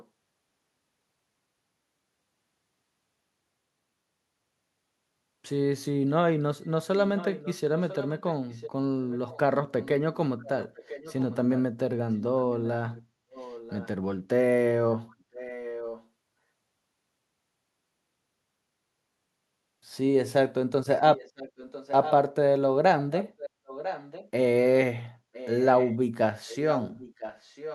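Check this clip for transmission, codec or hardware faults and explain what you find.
The clip has one recurring fault, an echo leak, heard at 0.00–0.07 s, 6.64–9.88 s, 10.42–13.89 s, 15.10–16.07 s, 21.15–22.13 s, 22.99–24.30 s and 25.33–27.74 s. A copy of the speech trails the original by about 1 s. Its level is roughly 25 to 10 dB below the speech and is loudest around 21–24 s. This is likely a far-end echo canceller failing to remove what its loudspeaker fed into its microphone. On a spectrogram it appears as fainter, shifted duplicates of the speech harmonics. On the waveform it adds a low-level envelope one second behind.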